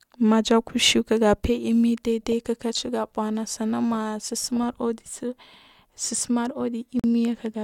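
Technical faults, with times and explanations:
7.00 to 7.04 s, gap at a join of encoded pieces: the speech stops dead for about 44 ms and then resumes exactly where it left off. Two separately encoded segments were joined without trimming, so the encoder's start-up delay and the padded final frame both remain as silence. On the waveform this is a flat stretch with abrupt, slightly blurred edges. The spectrogram shows a narrow vertical blank band cutting across every frequency.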